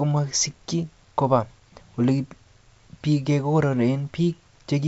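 Nothing is technically wrong with this speech recording, which carries the ordinary sound of G.722 wideband telephone coding at 64 kbit/s.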